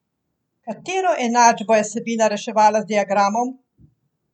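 Nothing stood out on listening to this speech recording.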